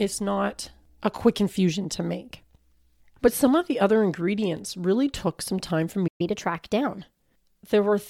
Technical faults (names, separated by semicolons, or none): playback stall; catch-up at higher speed